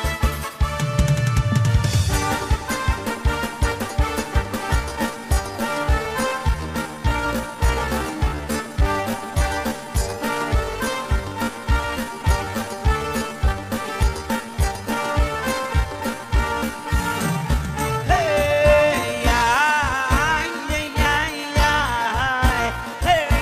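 At 4.68 s the pace drops abruptly and stays slow to the end. This is a time-stretched section, running at 0.634 times the original speed. The pitch does not fall with it. The likely cause is software lengthening the audio to fill a set duration, repeating short pieces so the pitch holds. The slowed audio drags.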